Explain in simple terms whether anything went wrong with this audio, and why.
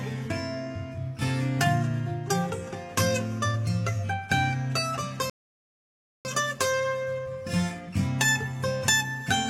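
A rebuffering stall interrupts the music at 5.30 seconds. The sound drops to silence and stays silent until 6.25 seconds, then picks up exactly where it left off. The player had played everything it had downloaded and had to wait for more to arrive before it could continue. No music is skipped or lost, but the gap adds about 0.95 seconds of dead air to the playback.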